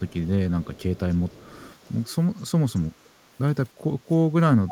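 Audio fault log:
0.08–0.14 s, 0.64–1.0 s, 1.29–1.75 s, 2.76–2.81 s: echo leak. A very faint copy of the speech returns 310 ms later, likely from a far-end canceller letting loudspeaker pickup through. It is a distinct delayed repeat, not a smooth reverberant tail.
4.65–4.71 s: speech suppressed in double talk. The talker drops very deeply for a moment while the other side speaks, likely from echo suppression during overlap, rather than an abrupt packet-loss gap.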